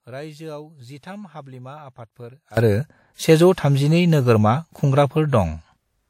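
At 2.57 s a sudden gain jump of about 22 dB lifts speech and background noise together, likely from gain applied without a ramp, showing as an abrupt waveform step.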